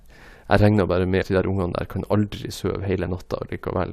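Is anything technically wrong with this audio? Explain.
Yes. From 1.22 to 1.24 s the speech is hit by damaged data in a compressed stream. Corrupt bytes make the decoder misread a frame and hunt for the next valid header, giving a roughly 20 ms glitch.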